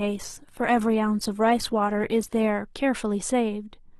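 From 0 to 2.5 s the speech plays thin and smeared: an adaptive stream starting at a low bitrate, roughly 16 kbit/s Opus. Then clarity jumps abruptly, without a gap.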